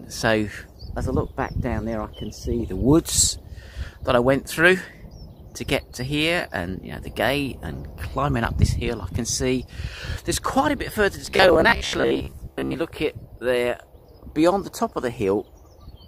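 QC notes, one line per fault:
11.26–12.76 s, robotic sound from repeated short buffers: fresh audio likely stopped arriving in time, so the playback side kept re-emitting its last short slice, about 15 ms long, while incoming material went missing, roughly half the signal being repeats. Looping that slice at a fixed interval stamps a steady 66.7 Hz buzz onto the sound, turning it rigid and metallic for this stretch while it still loosely tracks the original contour.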